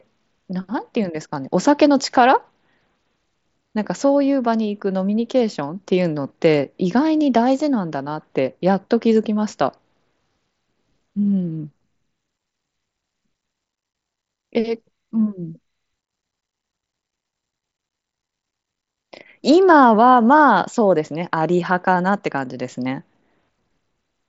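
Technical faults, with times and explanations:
Nothing here counts as a fault; the speech simply comes over a Bluetooth mSBC headset link, so it tops out around 7.7 kHz, which is normal for that codec.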